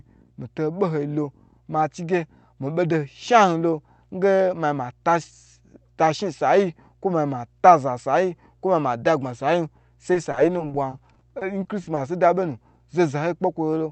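A mains hum runs under the speech for the whole clip: a steady low tone at 60 Hz, roughly 35 dB below the speech, from power-line interference leaking in through a ground loop or nearby transformer. It holds constant in pitch and level, unlike the rumble of wind or handling noise.

From 10.13 to 11.99 s there is repeated packet loss with a robotic sound. About a dozen brief dropouts, the longest 40 ms, are each patched by extending the preceding sound. The closely spaced repairs make the speech choppy. Unlike a single dropout, the stutter recurs throughout the stretch. The speech's upper range stops near 8 kHz, as expected from the call codec.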